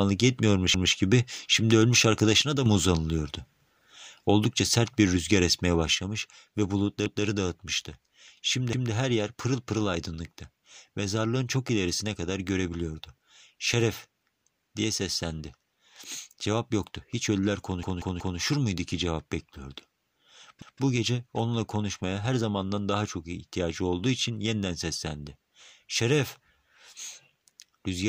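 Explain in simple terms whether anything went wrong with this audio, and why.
Two kinds of fault can be heard in this speech.

A repeated buffer happens at 0.74 s, just before "gibi şimdi ölmüş", and again at 7.06, 8.73, 17.83 and 20.62 s. Each time, a chunk of about 0.19 s plays at least twice, which fits an 8192-sample buffer. At 17.83 s the same chunk plays four times in a row, until 18.39 s. New audio arrived late, so the player repeated what it already had. This is heard as a stutter with an abrupt join at each repeat.

One channel drops out from 2.42 to 2.66 s, between "yetmiyormuş gibi şimdi ölmüş" and "mı uzanılıyordu". It happens again at 5.95 s, right after "sert bir rüzgar esmeye", and this time it lasts to the end of the clip. At those points the speech suddenly becomes noticeably quieter. The likely cause is that one side of the stereo signal was lost, so only half of the sound reaches the combined output.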